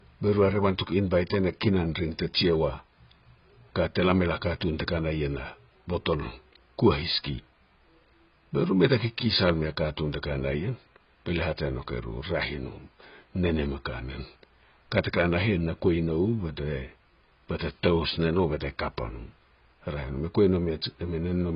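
Speech with heavy AAC compression damage throughout: nothing above 5.3 kHz, dull smeared tone, and warbly sibilants, likely from AAC-LC at a very low bitrate, fitting roughly 16 kbps.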